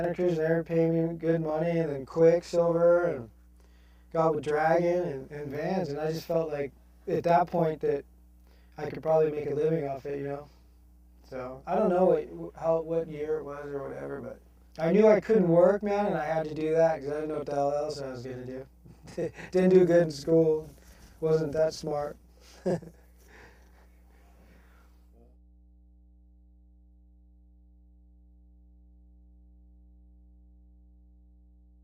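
Mains hum runs throughout the clip, a steady 60 Hz tone sitting roughly 20 dB below the sound. It comes from the power line leaking into the signal path, most often through a ground loop or a transformer close to the cabling. Channel delay (doubling) is also present from start to finish. One channel arrives about 42.7 ms after the other, which fits a 2048-sample buffer. When the two are folded to mono, that late copy is heard at equal level as a distinct doubled slap behind every sound.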